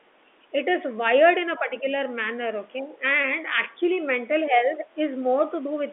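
At 1.59 to 1.85 s the speech sags by a few dB, at 2.79 to 3.04 s it drops harder, about 10 dB, and at 4.5 to 4.86 s it dips a few dB again. Each dip lasts a fraction of a second. This is likely speech suppressed in double talk: the echo canceller couldn't tell the near talker from loudspeaker echo and pulled the level down. The dips sit over narrowband telephone audio capped near 3.5 kHz.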